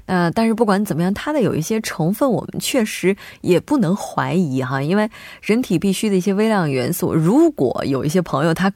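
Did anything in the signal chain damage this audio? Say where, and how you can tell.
No, nothing in the signal chain damaged this speech recording. None of the stages, from capture through to playback, leaves any audible trace of harm on it.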